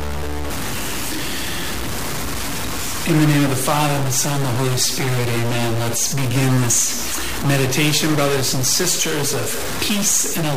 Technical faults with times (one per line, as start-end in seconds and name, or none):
0.00-10.56 stuck bit